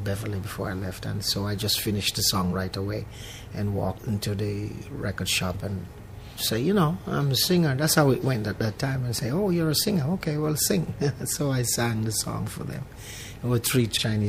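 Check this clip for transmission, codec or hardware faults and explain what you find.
There's one fault: a single loud pop at 9.19 to 9.21 s. It's a sharp, brief crack sitting a few dB above the surrounding audio, and the sound carries on normally underneath it. The cause is likely a voltage step from a plug, switch, static discharge or driver glitch that got added straight onto the signal, with the downstream circuitry shaping it into that short thump.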